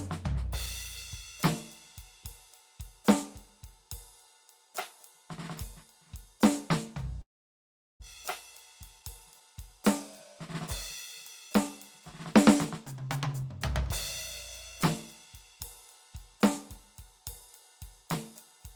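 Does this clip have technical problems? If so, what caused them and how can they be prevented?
Yes. From 7.21 to 8.04 s there is a long network dropout. The most likely cause is that the stream stopped arriving for most of a second, leaving about 600 ms of music that never played. The receiver stretched the last sound into a fading fill, then went quiet until the music resumed further along, with the passage missing and the timing jolted by around a fifth of a second. Prevention: use a more stable network path, with redundancy or forward error correction for bursty loss.

From 9.00 to 9.78 s and again from 12.45 to 13.44 s there are jitter buffer speed-ups. After delayed audio arrived in a bunch, the receiver's buffer held more than its target and trimmed short pitch-period slices in quick succession, shedding roughly 70 ms each time. The music plays about 8% fast in the first stretch and 6% fast in the second, at unchanged pitch, so the tempo visibly rushes before settling. 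Prevention: reduce network jitter, or let the buffer drain more gradually over a longer span.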